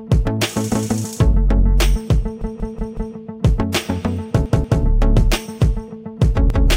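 A repeated buffer stutters the audio three times: a roughly 0.19 s chunk plays four extra times from 2.42 to 3.16 s, twice more from 4.46 to 4.83 s, and once more from 6.50 to 6.69 s. The repeat length fits an 8192-sample buffer that was replayed when fresh data arrived late. A waveform or spectrogram shows identical tiled blocks with abrupt vertical seams at each join.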